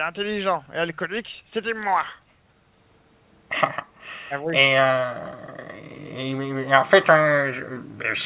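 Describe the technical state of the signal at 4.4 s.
Around 4.4 s the speech dips briefly, about 5 dB at its deepest, across 4.29 to 4.54 s, for roughly 150 ms in total. This is likely speech suppressed in double talk. The echo canceller could not separate the near talker from loudspeaker echo, so it turned both down.

Within that dip, from 4.42 to 4.46 s, a very faint delayed copy of the voice sits about 40 dB below the speech. It lags by 322 ms. This is an echo leak, likely from a loudspeaker whose canceller let some residual echo through and sent it back. The band-limited call path, with nothing above 4 kHz, carries it too.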